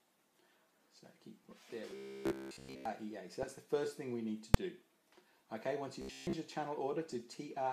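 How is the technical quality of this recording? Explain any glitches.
It's got a few clear problems, mostly reception burbling, plus a couple of buzzy patches and one sharp bang.

DAB burbling shows up at 1.44 to 1.59 s, 3.43 to 3.57 s, 5.15 to 5.50 s and 7.1 to 7.31 s. Weak reception lets bit errors slip into the audio data, so individual frequency bands jump around, giving short blips of noise in single bands.

The robotic sound from repeated short buffers runs from 1.91 to 2.85 s, fully taken over, and from 6.02 to 6.36 s, mostly taken over. It's a rigid 66.7 Hz metallic buzz, likely from the last 15 ms being looped while fresh audio failed to arrive.

At 4.54 s there's a single loud bang. That's invalid numbers at full scale: a bad calculation pinned a 2.9 ms block to maximum level, which fits a 128-sample block.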